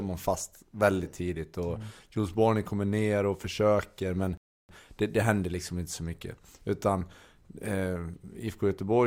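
At 4.37 s a rebuffering stall cuts the speech to silence until 4.69 s. The player ran dry. Speech resumes exactly where it stopped, adding 0.32 s.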